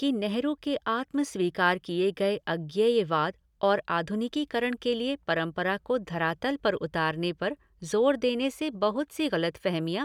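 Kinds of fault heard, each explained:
Listening closely to the speech, nothing stood out as a technical fault at any point.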